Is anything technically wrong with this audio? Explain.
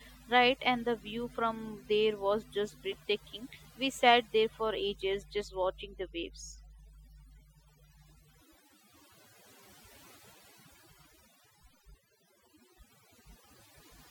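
Yes. Overdone noise removal runs throughout the speech: aggressive spectral gating cuts bands near the noise estimate, leaving near-silent, twinkling gaps.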